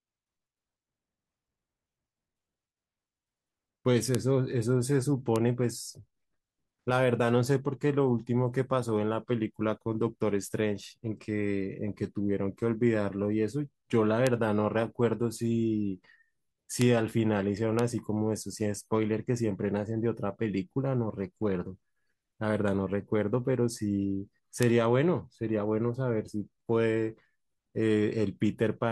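Bit error spikes occur at 4.15, 5.36, 14.27, 16.82, 17.79 and 24.63 s. Each is a single sharp tick, broadband and unrelated to the speech. A flipped bit throws one to three samples far off their true value by a power of two before they snap back. The peaks reach about -2 dBFS at 4.15 and 24.63 s, about -8 dBFS at 5.36, 14.27 and 16.82 s, and about -14 dBFS at 17.79 s.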